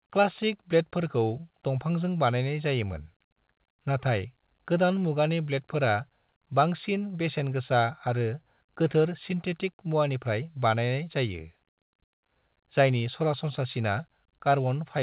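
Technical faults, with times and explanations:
No technical faults are audible in the speech; the band stops at 4 kHz, which fits a narrowband call path such as 64 kbps G.711 mu-law.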